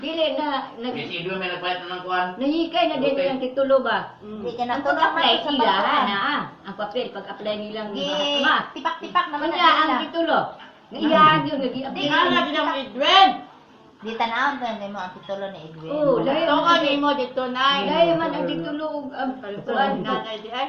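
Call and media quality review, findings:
Faint regular ticks, roughly once a second, 0.98 s to 20.48 s, around twenty in all. Clock slip clicks, one sample dropped or repeated each time. Likely cause: two free-running device clocks with no sync, mismatched by roughly 20 ppm, so a whole sample of drift builds up each second.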